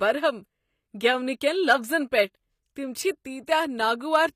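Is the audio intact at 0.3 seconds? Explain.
No. At 0.3 seconds the speech carries HE-AAC compression damage that runs the whole clip. The treble is rebuilt by copying lower bands upward, so s sounds come out gritty and lispy, nothing sounds above 15.5 kHz, and a low bitrate near 24 kbps is the likely cause.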